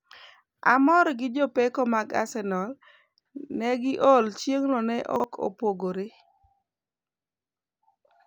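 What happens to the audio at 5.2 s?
Just after "negi or chieng'no ne", from 5.16 to 5.24 s, the speech briefly jumbles. These are chunks out of order: a 40 ms chunk arrived one chunk late and plays after its successor, so nothing is lost, but three hard joins break the flow.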